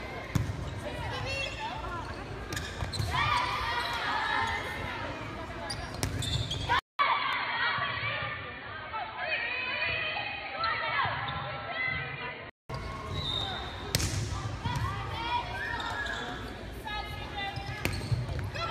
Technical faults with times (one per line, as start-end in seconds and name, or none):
6.79-12.70 input switched to a poorer device
7.33 dropped samples